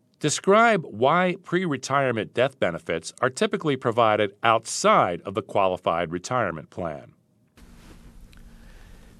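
Nothing here stands out as a technical problem; the speech just carries on without anything going wrong along the way.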